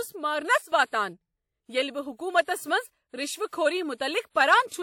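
The speech recording has two technical faults. At 0.58 s there is a sudden gain jump: the level falls by about 12 dB from one sample to the next and stays down until 0.72 s. The background noise drops together with the speech, so it is not a fade or a compressor acting on loud syllables. The abrupt step with no ramp is likely a digital gain setting applied instantly rather than smoothed. At 3.48 s there is pre-echo: a short hiss runs for 45 ms up to 3.53 s, ahead of a sharp attack, and the attack itself sounds soft and smeared. The hiss comes before the onset rather than after it, which separates it from a reverb tail or an echo. A transform codec spread quantisation noise, sized for the loud attack late in its block, across the quiet moment before it.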